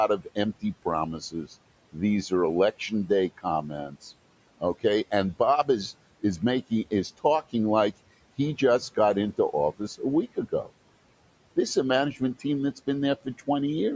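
From 0.08 to 4.04 s, the noise suppressor cuts into the speech, taking parts of it for noise. In total about half a second is pulled down, by up to about 17 dB. It returns from 4.6 to 7.54 s, dipping up to about 18 dB. Shorter cuts follow from 9.79 to 10.7 s, about 14 dB, and from 12.15 to 13.48 s, about 12 dB. Soft sounds there turn faint and swallowed, sinking toward the room noise.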